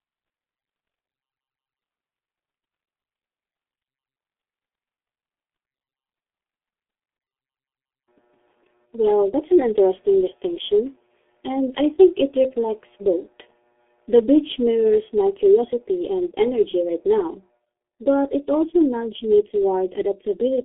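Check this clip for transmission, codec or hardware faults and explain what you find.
There's one fault, and it runs through the whole recording: the speech has been through the G.723.1 codec, and the damage is heavy. Nothing gets past about 3.8 kHz, and the band sits roughly between 250 Hz and 3.5 kHz, so it's muffled and thin. The codec chops the signal into 30 ms frames and rebuilds the voice from a coarse, slowly updated model, which fits a rate around 6.3 kbit/s. That's why it sounds hoarse and the consonants smear together.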